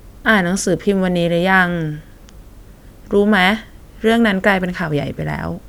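No technical faults are audible in this speech recording.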